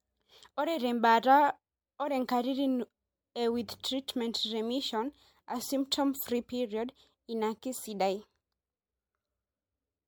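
Speech carrying generation loss for its whole length: the sound is swirly and hollow, consonant attacks are smeared, and the texture is worse than a single MP3 pass at a rate that fits 96 kbit/s would give, even though content still reaches 20.1 kHz. That mismatch separates it from one low-bitrate encode, which would trade bandwidth for cleaner artefacts. The likely cause is repeated decoding and re-encoding, about five times, each pass adding fresh quantisation noise on a shifted frame grid.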